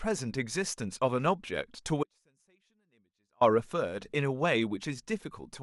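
A likely break in the signal path upstream, with the downstream chain left live, causes an audio dropout to a faint residue in this speech recording from 2.03 to 3.41 s. The speech cuts off abruptly for 1.38 s, leaving only a faint leak roughly 40 dB below normal level before returning mid-flow.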